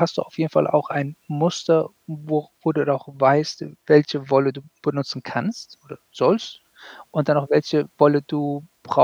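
No technical faults can be heard anywhere in the speech. There is nothing to place on the timeline and no mechanism to explain.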